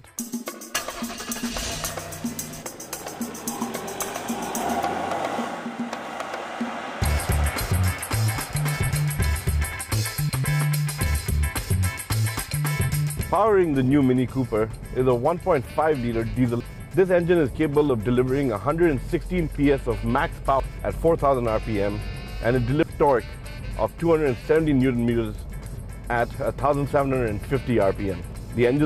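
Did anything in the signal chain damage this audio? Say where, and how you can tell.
Yes, damaged data in a compressed stream, at the codec stage: brief glitches at 9.73, 16.60, 20.60 and 22.83 s. Corrupt frames make the decoder lose sync and skip ahead to the next header.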